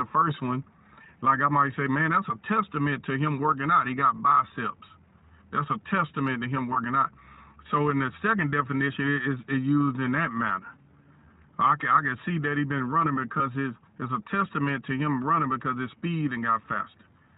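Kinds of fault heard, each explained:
iLBC codec: a narrowband VoIP codec around 15.2 kbps with 20 ms frames cuts everything above 4 kHz, leaving this speech plainly rough and synthetic.
Lost iLBC frames: single 20 ms packets dropped near 6.74 and 13.38 s, and the decoder filled each with a brief, slightly buzzy or breathy held vowel before recovering immediately.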